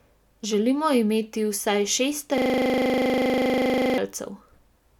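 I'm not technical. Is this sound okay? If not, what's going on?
No. Just after "imeti vsaj šest", from 2.38 to 3.98 s, the sound turns into a rapid buzzing stutter. This is a system hang loop: the computer briefly froze, and the sound hardware kept replaying the same 40 ms snippet 25 times a second.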